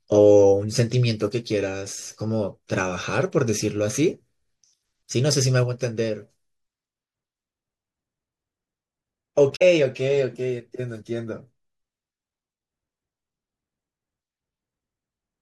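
Damaged data in a compressed stream corrupts one stretch of this speech recording, so the decoder misreads those frames and loses sync until it finds the next valid frame header. The result is a brief disruption from 9.52 to 9.62 s.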